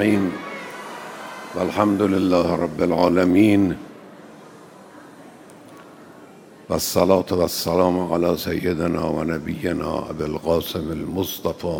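No technical faults are audible.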